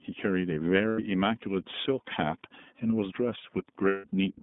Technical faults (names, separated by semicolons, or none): iLBC codec; lost iLBC frames